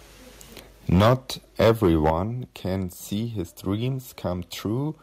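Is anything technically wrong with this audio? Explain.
Yes. There are two faults, and they interact.

Microphone overload occurs from 0.92 to 1.13 s and again from 1.6 to 2.1 s. The peaks run about 10 dB and about 8 dB past the converter's limit, likely because the microphone's input volume is set too high. Their tops are sliced flat, roughly a sixth of the samples in the first burst and a small fraction in the second. The loudest syllables take on a harsh, crackly edge.

Microphone volume stepped down happens at 1.01 s and at 2.1 s, with cuts of about 3 dB and then about 7 dB. The likely cause is the call software reacting to the clipping by lowering the input volume in single steps. Both speech and background drop abruptly. The second drop is the larger one.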